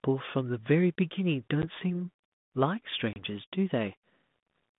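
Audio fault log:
1.62 s and 3.13–3.21 s: packet loss on an ADPCM call. Hard-edged silences of 10 ms and 30 ms, consistent with about one and three lost packets. The G.726 decoder's predictor and step size then disagree with the sender's, so speech resumes with brief, slight distortion.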